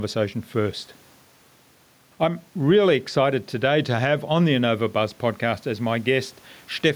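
Gain pumping runs throughout: the gain swings about 5 dB under loud speech, likely a fast limiter fighting excessive input gain.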